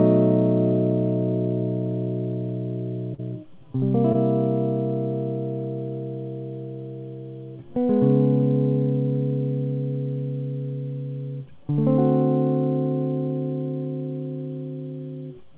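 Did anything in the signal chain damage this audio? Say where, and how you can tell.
Yes: short concealed packet loss at 3.14–3.20 s and 4.12–4.16 s. About 40 ms and 20 ms of the music arrived too late, so the receiver extended the preceding sound, leaving brief smears.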